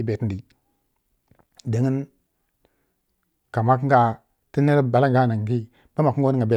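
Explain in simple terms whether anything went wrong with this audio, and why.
Nothing went wrong with this audio; the speech comes through with no technical problem to point to.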